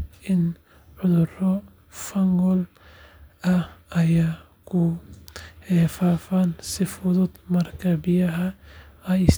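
No faults detected anywhere in this speech recording.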